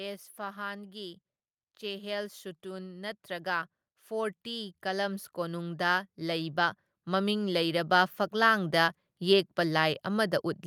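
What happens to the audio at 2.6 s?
At 2.6 s the automatic gain is rising. From 1.79 to 8.61 s the gain control lifts quiet input by about 13 dB. Speech and background swell together.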